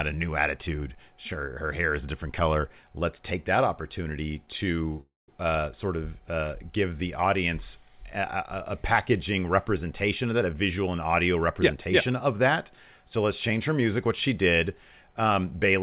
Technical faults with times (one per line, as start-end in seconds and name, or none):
5.01-5.30 call audio freeze
10.25-12.27 jitter buffer speed-up